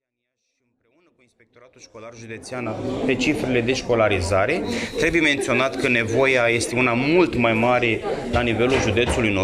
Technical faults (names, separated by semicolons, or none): none